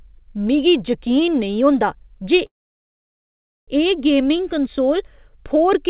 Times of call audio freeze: 2.46-3.69

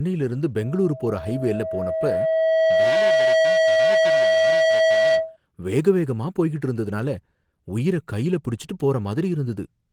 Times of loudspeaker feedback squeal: 0.56-5.37

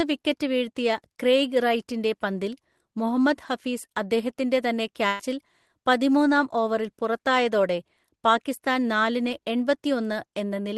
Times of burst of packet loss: 5.07-5.21

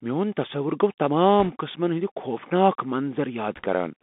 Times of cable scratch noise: none

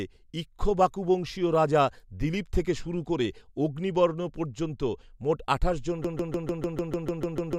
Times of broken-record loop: 6.04-7.58

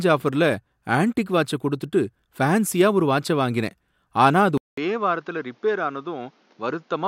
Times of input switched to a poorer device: 4.57-7.07

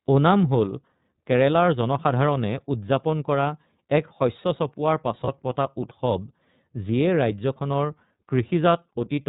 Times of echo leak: none

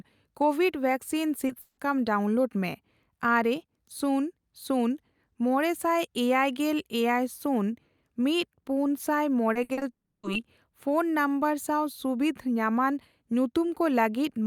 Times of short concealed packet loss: 1.47-1.51

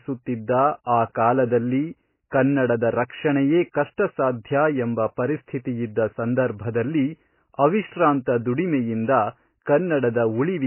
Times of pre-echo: 3.72-3.74

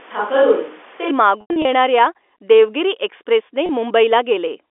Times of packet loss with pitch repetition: 1.41-1.65, 3.66-3.69

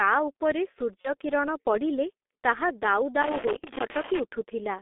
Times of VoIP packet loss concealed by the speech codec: 1.01-1.13, 3.59-3.64

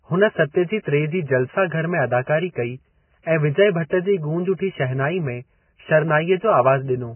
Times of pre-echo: 0.83-0.85, 3.90-3.92, 4.57-4.59

